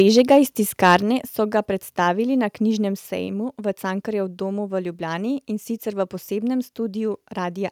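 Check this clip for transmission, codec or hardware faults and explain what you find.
Two faults are audible in the speech, both near the start.

Microphone overload occurs from 0.0 to 0.38 s and again from 0.84 to 0.96 s, just before "so ga predstavili na". Peaks run about 2 dB and then about 4 dB past the converter's limit. The tops are sliced off, giving a harsh crackle. The likely cause is microphone input volume set too high.

A microphone volume step-down follows at 1.02 s, again just before "so ga predstavili na". Voice and background drop abruptly by about 5 dB, likely from call software lowering the input gain after the clipping.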